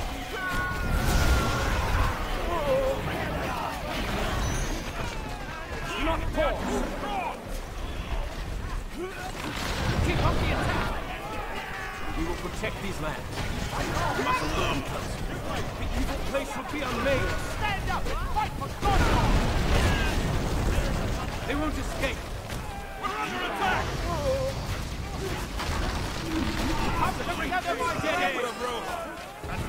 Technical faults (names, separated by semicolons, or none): overlap between stream segments